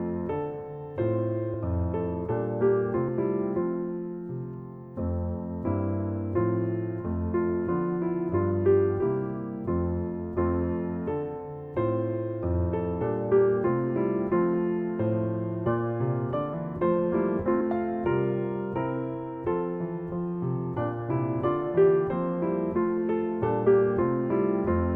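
Compressed frames skipped at 1.53 s, 13.00 s and 23.66 s: the decoder drops whole frames, so the sound leaps ahead about 50, 70 and 100 ms, each join a brief smeared blip.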